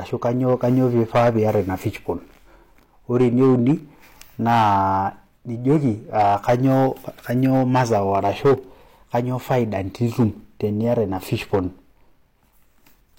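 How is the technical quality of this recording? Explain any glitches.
The recording has one fault. Hard clipping runs throughout the speech: the signal was driven about 10 dB past what a stage could pass, so a small share of samples, around two percent, had their peaks sheared flat, adding high harmonics heard as crackle and rasp on louder syllables.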